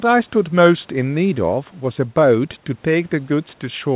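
No technical faults can be heard in this speech. It has come through a narrowband call path with nothing above 4 kHz, which fits the G.711 A-law codec.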